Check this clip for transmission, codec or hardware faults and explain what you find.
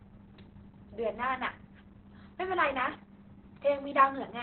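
One codec fault runs through the whole speech clip: Opus voice compression at a very low rate. From start to finish the voice is confined below about 4 kHz, the narrowband setting, and sounds muffled, hoarse and faintly robotic. That fits SILK mode at roughly 8 kbps. The linear-prediction coder models the vocal tract well but quantises the excitation so coarsely that breathy roughness creeps in. A plain telephone-style low-pass would dull the sound without adding that rasp.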